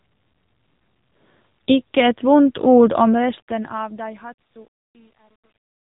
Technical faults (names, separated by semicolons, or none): AMR narrowband mobile codec